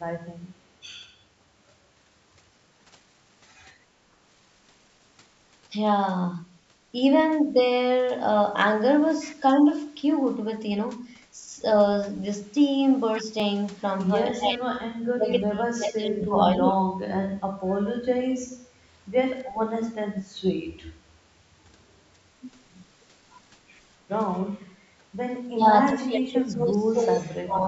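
At 13.40 s there is a repeated buffer. New audio did not reach the output in time, so the last small block played once more. That block lasted only 1.33 ms, which fits a 64-sample buffer. The repeat is too short to hear as a stutter. It comes across as a click or brief buzz, with no speech lost.

Next comes speech suppressed in double talk, most likely from an echo canceller reacting to both sides talking at once. It treated the talker's voice as echo and pulled it down. The voice sinks from 14.33 to 14.76 s, from 15.16 to 16.36 s, and from 16.58 to 16.98 s. At the deepest point it drops by about 30 dB. It dips again from 25.50 to 25.66 s, and from 25.87 s to the end. Those later drops reach about 25 dB. The speech dips, loses its high end or cuts out in pieces instead of running smoothly.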